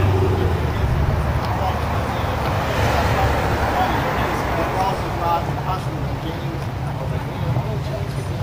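From start to end, crude rate conversion adds a gritty, inharmonic fizz. The sound points to a 32 kHz to 48 kHz step done by repeating the nearest sample. That repeating pattern makes tones about 30 dB below the signal, riding on loud, bright moments.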